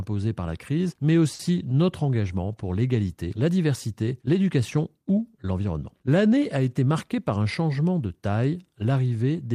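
At 1.33 to 1.40 s there is a short stall from a late packet. The jitter buffer ran dry, so the last sound was held for 60 ms. Nothing is lost.

From 6.78 to 7.46 s comes a jitter buffer speed-up. Short pitch-period pieces were cut, about 70 ms in all. The speech runs at 108% and sounds hurried, at unchanged pitch.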